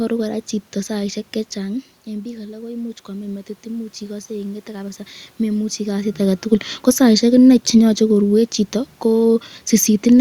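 After "chito saisyek", automatic gain rising runs from 1.66 to 5.07 s. The input fell by about 13 dB as the talker moved back, so the control slowly added about 5 dB. Voice and room noise swell together. On the waveform the envelope ramps up steadily, and on the spectrogram the noise floor brightens until "memuchi kasit aketukul ko".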